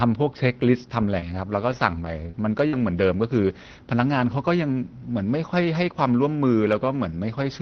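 Between 1.19 and 2.83 s, scattered short gaps appear: about three lost or late packets, the longest around 50 ms, each patched by extending the preceding sound. They come through as brief ticks and smears, and a spectrogram shows short smeared, stretched patches below the call path's roughly 6 kHz ceiling.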